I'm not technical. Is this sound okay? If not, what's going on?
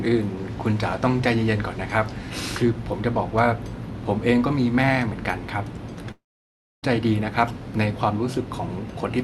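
No. At about 6.11 s the sound breaks off, and it returns at about 6.85 s. This is a long network dropout. The likely cause is that audio stopped arriving over the connection for roughly three quarters of a second. The receiver stretches the last bit of sound into a short fading buzz. After that there is near silence for about 0.6 s. When the sound resumes, that stretch is missing for good.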